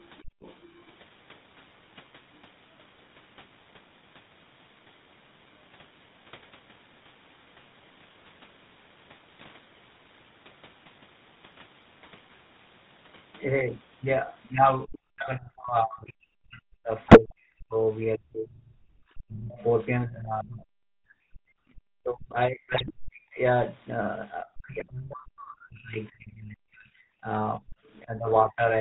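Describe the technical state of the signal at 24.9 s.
Right at 24.9 s the sound is rough and buzzy, with a gravelly edge and nothing above 4 kHz. This is GSM full-rate codec damage, present across the whole clip. The codec rebuilds the signal from a vocal-tract filter driven by sparse, regularly spaced pulses, which fits 13 kbps GSM full rate.

Over that buzz, from 24.74 to 24.93 s, the signal breaks into squawks, pops and gargling. These are GSM bit errors. Flipped bits corrupted the decoder's filter, pitch and gain values, so each damaged frame comes out with a warped spectrum or a level spike. The sound points to about nine bad frames.

The moment also falls inside a stretch from 24.43 to 28.62 s where the level dips and cuts out in pieces, at its deepest by around 40 dB, for roughly three seconds in total. The likely cause is speech suppressed in double talk, where an echo canceller turns the signal down while both sides speak at once.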